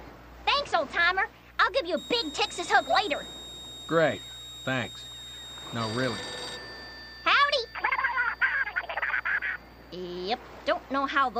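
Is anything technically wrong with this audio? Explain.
Yes. A switching supply whistle runs from 1.97 to 6.57 s. A nearby power supply is switching at an audible rate. It leaks in as a thin, high tone between 3.72 and 3.76 kHz, wavering slightly. It sits roughly 15 dB below the sound.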